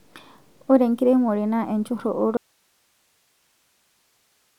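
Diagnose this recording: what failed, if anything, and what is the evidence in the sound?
At 2.37 s the speech cuts off abruptly and never returns: from there to the end only hiss remains, roughly 45 dB below the speech level. This is an audio dropout to a faint residue, likely from a lost connection in the analogue wiring ahead of a recording path that stayed live. The hiss floor separates it from a buffer or network dropout, which would fall to digital silence. The sudden cut, rather than a taper, rules out a fade or natural pause.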